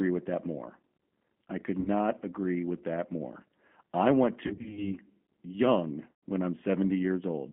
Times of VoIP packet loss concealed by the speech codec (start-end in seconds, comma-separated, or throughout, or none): 1.80-1.89, 4.47-4.94, 6.13-6.23